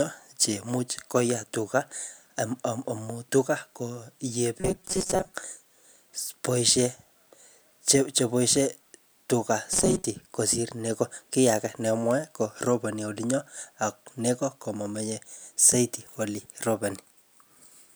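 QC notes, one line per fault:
4.60–5.34 s (just after "amu tuga koyee") and 9.73–10.06 s, robotic sound from repeated short buffers: speech becomes a rigid metallic buzz locked at 188 Hz, likely because a roughly 5.3 ms chunk was replayed in place of about half the real audio. There are no silent gaps, unlike dropouts, and the buzz stays fixed as the intonation moves.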